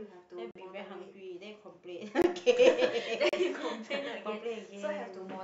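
At 0.51, 2.22 and 3.29 s the speech drops into a block of digital silence, lasting about 43, 21 and 36 ms. The output buffer likely wasn't filled in time, and the first two gaps fit 2048- and 1024-sample blocks. Each cuts out and back with no fade, so you hear short holes.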